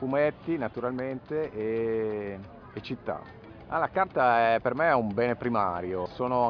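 No technical faults can be heard anywhere in the audio, and the signal holds steady without any break or disturbance.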